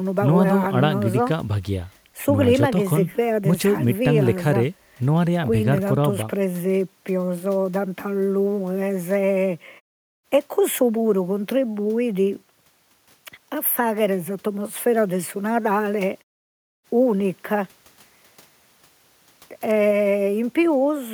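No technical faults can be heard anywhere in this recording.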